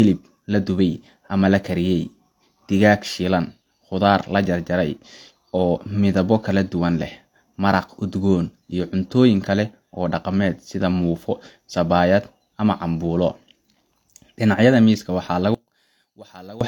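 Speech clip with two faults worth flagging. Throughout, the leftover codec artefacts don't fit a 192 kbit/s MP3, and nothing sits above 18.4 kHz. That points to low-bitrate audio saved at a high bitrate, likely an earlier pass through something like HE-AAC around 40 kbit/s. The bigger file can't bring back what was lost. Then from 15.55 to 16.61 s the level drops by about 23 dB and what's left is a faint copy. That fits one channel inverted, with the centred speech cancelling when the channels get summed to mono.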